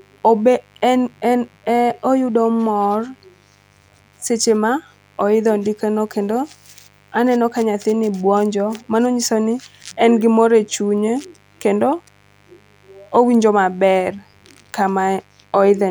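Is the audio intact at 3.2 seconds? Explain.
No. At 3.2 seconds, as across the whole clip, there is mains buzz. Some switching source or an unshielded lead is coupling into the signal path. On a 50 Hz supply it injects sharp spikes 100 times a second, so the interference carries a dense ladder of 50 Hz harmonics stretching into the kilohertz range. It comes through as a constant, gritty rasp under the speech, sitting well below it at around 35 dB down.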